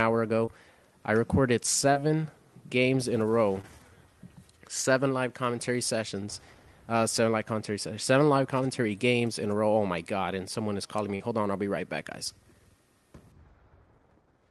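Short concealed packet loss occurs at 0.45–0.49 s, 1.93–1.97 s, 3.61–3.65 s and 11.15–11.22 s. About 20 ms of audio went missing in each of the first three and 40 ms in the last. The decoder extended the preceding sound before blending back, producing a brief smear or wobble.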